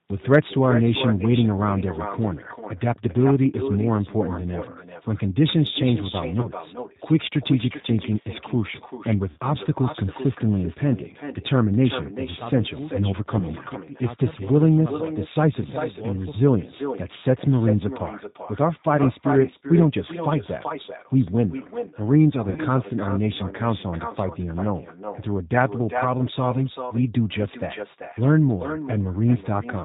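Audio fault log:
throughout: echo with no canceller. The far end's loudspeaker feeds its microphone with nothing removing it, so every phrase returns roughly 0.4 s later, about 9 dB quieter and thinner. On a spectrogram each syllable has a fainter duplicate shifted right by that delay.
throughout: G.729 codec. Speech is rebuilt at 8 kbit/s from a vocal tract filter, pitch predictor and sparse pulses, so it sounds rough and slightly synthetic. The spectrogram shows a hard ceiling at 4 kHz, with smeared, blocky harmonics below it.
6.40–6.48, 9.31–9.40, 13.39–13.44, 18.97–19.00 and 22.49–22.61 s: VoIP packet loss concealed by the speech codec. The decoder stretches its last pitch and filter through gaps of 30, 60, 20, 10 and 70 ms, giving buzzy tones or coloured noise that fade. The spectrogram shows frozen, flattened harmonics, and the waveform shows a decaying envelope that stays weak briefly afterwards.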